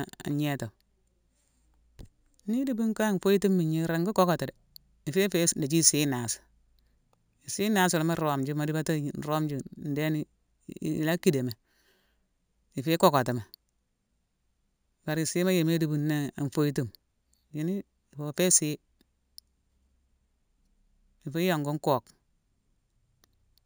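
It's a speech clip with imaging from sample-and-hold upsampling running the whole way through. There's a bright metallic fizz tracking the speech, with a mirrored band from 8 to 16 kHz at about -13 dB. That fits a 16 kHz original raised to 48 kHz by repeating samples, with no smoothing filter.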